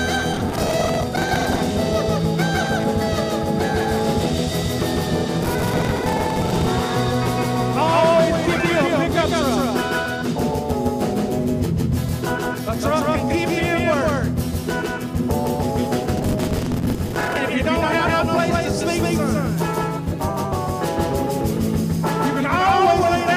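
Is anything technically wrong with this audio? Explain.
Yes, there are two problems. Throughout the clip a doubled audio track is present: the signal is likely being captured twice, with a second, slower path delivering the same audio about 150 ms late. That copy arrives at roughly the original's level, full-band and without any room decay, so every onset and transient is followed by a distinct, clean repeat a slapback's length behind. This smears attacks and gives the whole clip a stuttering, echoed quality.

Processor overload crackle appears three times, from 0.34 to 1.59 s, 5.43 to 6.68 s and 16.17 to 17.37 s. In each stretch the processor falls behind and misses dozens of buffer deadlines in quick succession, and each missed slot is filled with a scrap of old audio rather than fresh signal. The tiny hard-edged splices, which fit buffers of around 10 ms, pile up into a gritty, tearing crackle laid over the sound that stops abruptly once the load eases.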